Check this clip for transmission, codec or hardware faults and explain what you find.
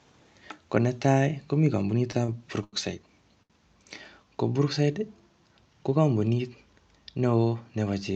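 Four short stalls from late packets occur in the speech, at 2.11 to 2.15 s, 2.25 to 2.30 s, 2.64 to 2.75 s and 3.43 to 3.52 s. In each, the jitter buffer ran dry, so the last sound was stretched for 20, 26, 87 and 71 ms before resuming with nothing lost. Each stall is heard as a briefly held sound with a slight buzz or dip. The band-limited sound of the call path points to a codec cutting off above about 8 kHz.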